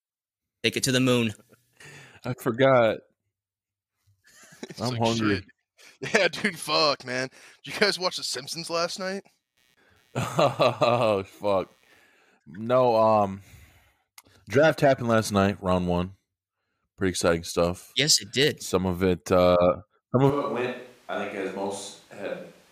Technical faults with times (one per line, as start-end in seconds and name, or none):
9.12-12.07 computer activity noise
20.30-22.71 switch to a distant microphone